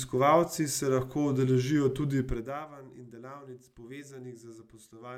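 No technical faults are audible anywhere in this recording.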